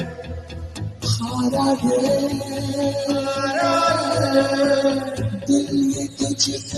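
A speech-tuned noise suppressor was left running throughout, treating sustained tones and decays as noise, so the level pumps and thins with swings of about 10 dB. From 0.04 to 1.06 s, the sound is cut by the noise suppressor, sinking by up to about 9 dB as the sound is mistaken for noise. At 6.58 to 6.75 s, the sound is cut the same way, dropping about 6 dB, with the top end limited to about 12 kHz by the call path's codec.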